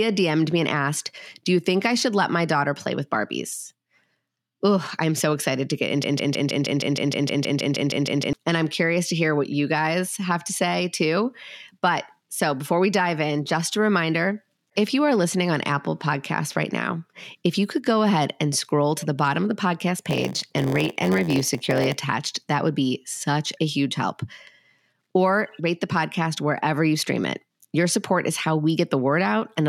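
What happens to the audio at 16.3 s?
Nothing goes wrong at 16.3 s; the speech carries on intact through that moment.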